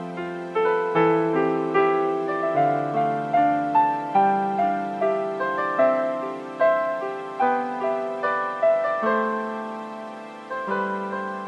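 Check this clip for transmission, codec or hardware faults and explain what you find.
Nothing stands out as a fault anywhere in the clip, so there's nothing to flag this time.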